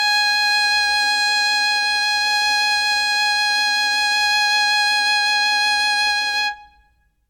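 The music comes through with no audible technical faults at any point.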